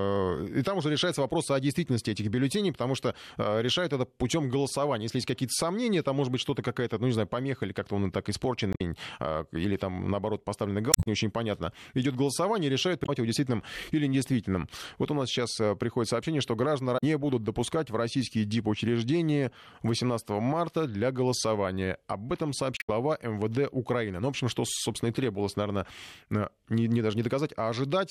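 Damaged data in a compressed stream hits the speech at 8.71–8.81, 10.91–11.07, 13.02–13.09, 16.97–17.04 and 22.77–22.90 s. Corrupted bytes make the decoder misread frames and lose sync until it finds the next header, so each spot is a brief chirp, squawk, click or short hole.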